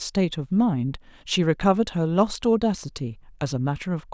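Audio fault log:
No audible faults detected.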